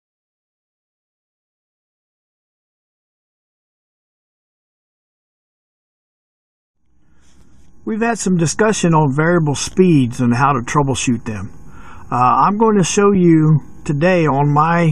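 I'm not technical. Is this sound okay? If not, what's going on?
No. Two tiny blocks of digital silence appear, at 7.41 s and 13.15 s. The sound drops out for a few thousandths of a second, leaving a small tick.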